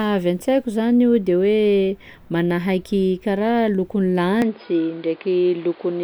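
From 4.42 s to the end, the speech turns dull and boxy with nothing above 5 kHz, a new noise floor and no gap, likely an input switched to a poorer device.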